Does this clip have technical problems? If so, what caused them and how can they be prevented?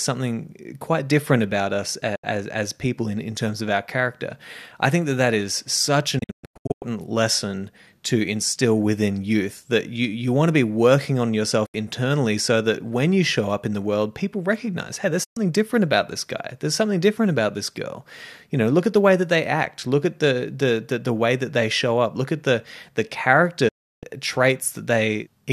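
Yes. These are digital broadcast dropouts: the receiver lost valid frames and muted, with a quick fade of about 8 ms, until good data returned. Audio vanishes at 2.15 to 2.24 s (after "quite different about us", before "as people in in"), 6.19 to 6.83 s (several holes totalling 480 ms), 11.66 to 11.75 s (after "to be working on"), 15.23 to 15.37 s (between "people recognize hey there's" and "different about this guy") and 23.68 to 24.03 s. The lost lengths fit frames of about 24 ms. A stronger, steadier reception signal, through better antenna placement or a better receiver, would prevent this.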